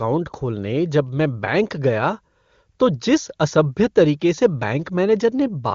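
No technical faults can be heard anywhere in the speech. It has passed through the AMR wideband (HD Voice) codec, and its clear, smooth character fits one of the codec's higher rates, such as 23.85 kbit/s, leaving at most faint traces.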